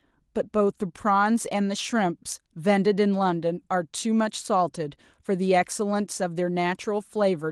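Listening to this speech clip, carried over Opus voice compression, nothing stood out as a technical problem.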